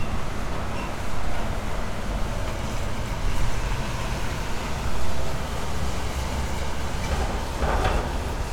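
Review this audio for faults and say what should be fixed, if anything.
Nothing stood out on listening to these sounds, so there is nothing here that calls for fixing.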